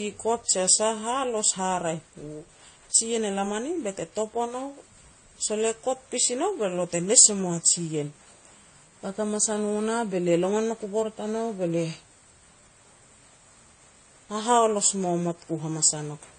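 From start to finish the speech has nothing above 9 kHz, plus a layered smeary, swirly texture, which points to transcoding between lossy codecs, likely a WMA pass around 64 kbit/s re-encoded as AAC-LC near 32 kbit/s, stacking the second codec's artefacts onto the first's.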